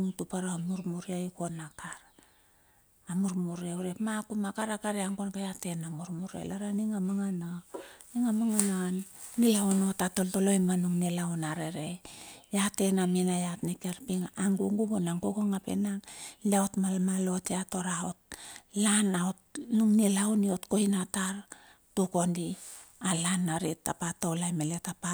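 No faults present; the speech signal holds steady across the whole recording with nothing to flag.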